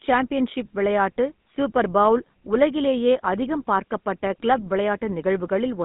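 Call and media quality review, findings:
GSM full-rate codec, throughout: buzzy, gravelly speech, band limited to 150 Hz–3.6 kHz; pulse-driven vocal-tract model with decimated excitation, fits a 13 kbps full-rate stream.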